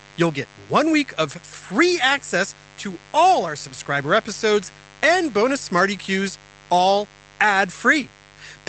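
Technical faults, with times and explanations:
Throughout: mains buzz, a steady raspy 50 Hz hum sitting about 25 dB under the speech, its spiky harmonics climbing well up the spectrum from switching interference.
2.47 s: lost packet rebuilt from error correction, between "one week of free" and "to all our subscriber", a 20 ms patch sounds rougher and noisier, played from the low-bitrate backup copy.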